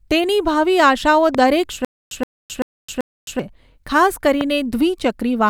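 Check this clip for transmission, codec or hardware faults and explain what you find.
Two kinds of fault show up here, a pair of loud pops and a stretch of stutter with silent gaps.

The loud pops land at 1.35 to 1.37 s and again at 4.41 to 4.43 s. Each is a single sharp crack, peaking roughly ten dB over the speech, with the speech carrying on right underneath. The cause is likely a sudden voltage step or pulse getting into the chain, from a plug, a switch, static or a driver hiccup, which the following circuitry turns into a quick snap.

From 1.85 to 3.39 s there's a stutter with silent gaps. A 122 ms fragment of speech plays, then about 265 ms of dead digital silence, repeating every 387 ms, four times over. That's likely the player or stream stalling and replaying its last buffered chunk on each retry before running dry. Whatever speech should have filled that stretch is simply gone.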